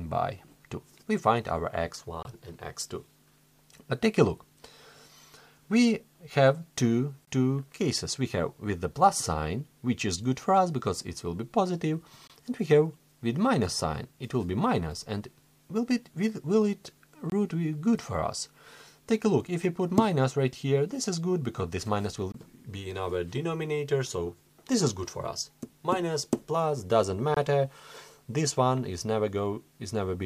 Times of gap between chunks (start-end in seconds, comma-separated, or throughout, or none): 2.23-2.25, 7.25-7.27, 12.27-12.30, 17.30-17.32, 22.32-22.34, 27.34-27.37